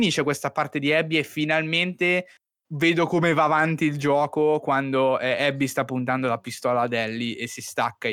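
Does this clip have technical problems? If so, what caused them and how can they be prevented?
No, nothing in this speech recording stood out as a technical problem on listening, so there is nothing here that needs a cause traced or a fix applied.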